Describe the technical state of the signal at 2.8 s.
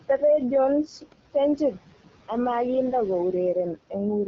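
At 2.8 s the speech is affected by noise suppressor artifacts, which run through the whole clip rather than starting at that moment. The suppressor tracks the steady room noise, which sits about 16 dB below the speech, and pulls down each frequency band it judges to be noise, frame by frame, by about 16 dB. The noise floor therefore drops away in gaps and comes back up under the speech.

The same moment also carries AMR wideband (HD Voice) codec damage, present throughout. The codec models speech with a pulse-excited vocal tract up to 6.4 kHz and fills the band above that with shaped noise, and nothing is heard above about 7.5 kHz. The coding damage is plainly audible: the speech has a rough, raspy edge rather than the clean sound of the higher rates, which points to one of the two lowest modes, around 8.85 kbit/s.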